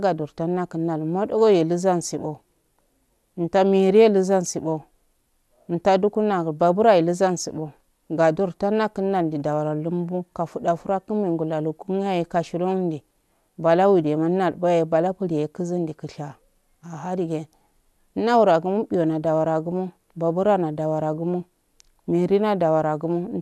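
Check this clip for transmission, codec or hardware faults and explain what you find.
Nothing stood out on listening to this recording.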